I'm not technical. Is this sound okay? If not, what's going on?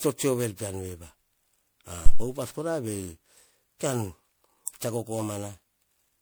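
No. The whole recording sounds swirly, hollow and smeared, with the starts of sounds blurred. That is likely generation loss: the audio was saved as an MP3 and re-saved around ten times, and each pass added fresh damage that built up.

At 2.06 to 2.24 s there is a deep thump, a phantom power thump. Power to the microphone input was switched on or off while recording, and that sudden jolt came through as a low thud that dies away quickly.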